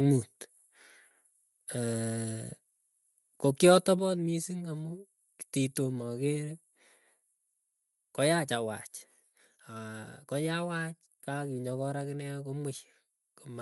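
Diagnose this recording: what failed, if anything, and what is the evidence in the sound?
At the codec stage, the speech was likely carried over Bluetooth with LC3 compression, the LE Audio transform codec, at a setting that sounds like roughly 48 kbps with 10 ms frames. Throughout the clip the damage is plainly audible. The encoder cannot afford every upper-spectrum coefficient, so it discards some and fills the gaps with synthetic noise. The voice therefore carries a breathy, grainy texture over its highs.

At the converter stage, the microphone was likely driven about 3 dB past full scale from 3.64 to 3.77 s, producing microphone overload. The converter could not represent those peaks, so their tops were sheared flat on a small share of the samples. That flattening creates added harmonics, heard as a brief harsh, crackly edge on the loudest syllable in that span.

In call processing, the software responded by turning down the device's input gain, and the microphone volume stepped down at two points. 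The first step, about 6 dB at 4.0 s, comes just after the clipped peak. The second, about 2 dB at 8.55 s, is smaller. Each is an instant drop in the level of the speech and the background together, which is the likely signature of an automatic gain reduction.

On the Bluetooth link, lost LE Audio frames leave a 50 ms gap from 6.68 to 6.73 s, which fits five missing 10 ms frames. The decoder conceals the loss by reusing the last good spectrum with random signs and fading it. Over that stretch the speech becomes a short noisy smear, with its pitch and clarity washed out before normal audio returns.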